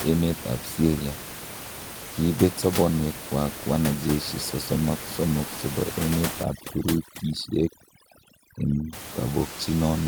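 In this speech recording, right after "chebo emet", from 6.43 to 8.93 s, the background drops and breaks up into twinkling specks: overdone noise removal, with frequency bands near the noise estimate cut away along with quieter voice detail.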